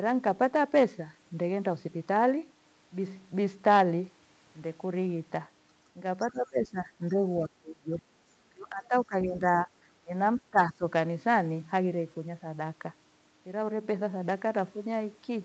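From 6.25 to 8.01 s, 8.53 to 9.68 s, 10.04 to 10.13 s and 10.37 to 10.83 s, the speech sinks by up to about 20 dB, in places about 15 dB. This is likely speech suppressed in double talk, where the echo canceller cannot separate the talker from the loudspeaker echo and turns both down. Unlike packet-loss dropouts, the loss is a ducking of the voice by the echo canceller.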